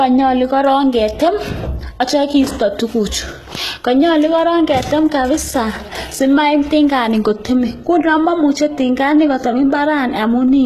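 A speech clip with HE-AAC compression damage running through its whole length. The damage is plainly audible. The treble reaches high but is not genuine. S sounds come out gritty and metallic, with a lispy edge. That points to spectral band replication: the upper band is rebuilt by copying lower bands upward, so its harmonics fail to line up. Nothing is heard above 12.3 kHz. The likely cause is HE-AAC at a very low bitrate, around 16 kbps.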